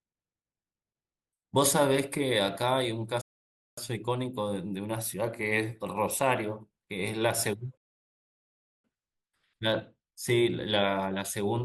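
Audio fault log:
3.21–3.78 s, rebuffering stall: the speech drops to dead silence for about 0.56 s, then picks up exactly where it left off, with nothing skipped. The player ran dry of downloaded audio and waited for more before carrying on.
7.77–8.84 s, rebuffering stall: the same thing again, only longer, a gap of about 1.07 s before the speech resumes seamlessly. Nothing is lost here either; the clip just runs that much longer.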